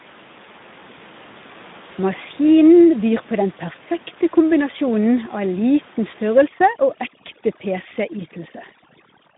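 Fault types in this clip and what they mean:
Speex codec: Speex is a CELP speech codec. It rebuilds the voice from a compact model and a coded excitation signal. Here the coding damage is plainly audible: the speech sounds rough, noisy and hoarse, because too few bits describe the excitation. The voice sits in a telephone-like band from about 150 Hz to 3.7 kHz, with nothing above 3.8 kHz. The sound fits a low setting of around 11 kbps.
overdone noise removal: From about 6.47 s to the end, a noise reducer is working far too hard. It pushes down each frequency band that comes near its noise estimate, and quiet parts of the voice get cut along with the noise. The room noise, normally about 23 dB below the speech, drops and breaks up into twinkling specks.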